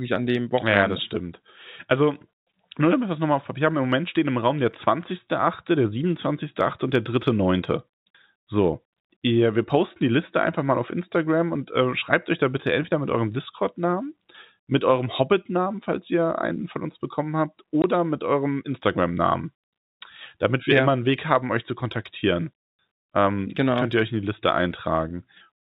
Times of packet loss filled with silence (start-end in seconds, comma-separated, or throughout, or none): 17.82